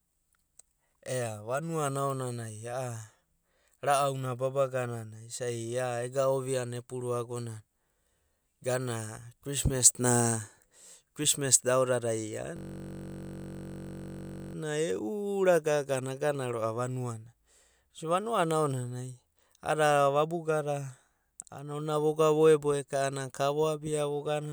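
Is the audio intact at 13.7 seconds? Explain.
No. After "krismas da aodadai", from 12.57 to 14.55 s, a steady 46.9 Hz buzz sounds. This is a system hang loop: a frozen system replays one 21.33 ms buffer.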